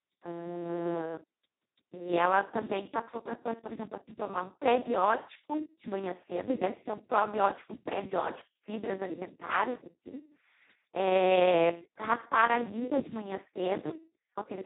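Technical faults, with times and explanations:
Throughout, Speex codec: starved excitation leaves the speech hoarse, noisy and robotic, consistent with roughly 2 kbps, and nothing survives above 3.8 kHz.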